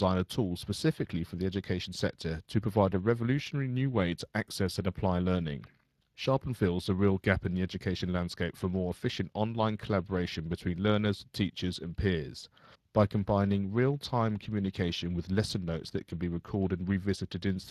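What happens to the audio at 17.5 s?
Speex codec damage is present at 17.5 s, as it is throughout the clip. This CELP speech codec models the voice with a vocal-tract filter driven by a coded excitation signal, and the limited bits for that excitation leave the speech plainly degraded, with a noisy, hoarse roughness. The density of the coding points to a Speex stream around 22 kbps. Nothing is heard above 15.4 kHz.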